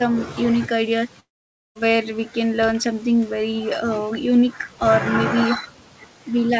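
Long network dropout from 1.20 to 1.77 s: the speech gives way to a short fading buzz, then about half a second of silence, and resumes with 560 ms lost, likely because packets stopped arriving and the receiver could only stretch the last sound before going quiet. The G.722 call path carries nothing above 8 kHz.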